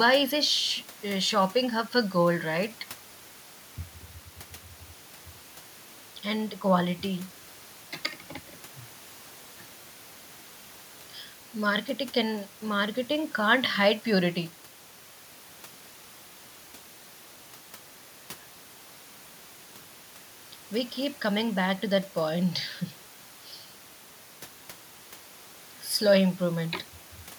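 Nothing goes wrong anywhere in this speech recording, so there's honestly no technical fault to point to at any moment.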